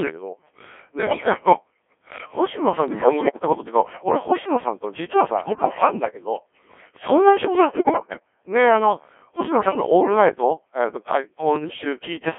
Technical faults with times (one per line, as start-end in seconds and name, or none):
0.00-12.38 Codec 2 vocoder
1.01-1.34 bit errors on digital voice radio
2.88-3.42 bit errors on digital voice radio
5.44-5.69 bit errors on digital voice radio
7.76-8.20 bit errors on digital voice radio
9.52-9.86 bit errors on digital voice radio
11.56-11.84 bit errors on digital voice radio